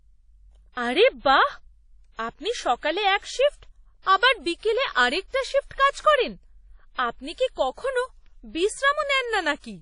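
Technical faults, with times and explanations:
Throughout, WMA compression: plainly audible washy ringing with hiss that breathes with the speech, likely from encoding at about 32 kbps; the spectrogram is empty above 10.1 kHz.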